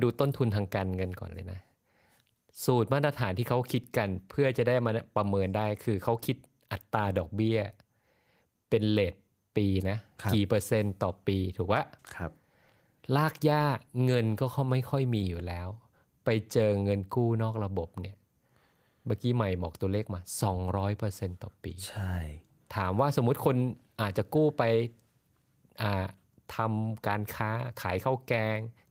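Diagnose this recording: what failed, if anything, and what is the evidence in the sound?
Nothing in the chain has failed: the speech holds its full bandwidth throughout, and the Opus voice compression, running in hybrid mode at 24 kbps, is doing its job with only the light coding texture expected at that rate.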